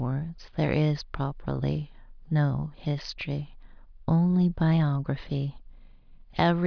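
No technical faults can be heard anywhere in the speech.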